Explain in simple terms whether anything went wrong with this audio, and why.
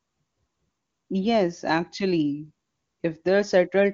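Nothing went wrong here; the speech comes through the HD Voice phone codec just as it's meant to, with nothing that points to a fault.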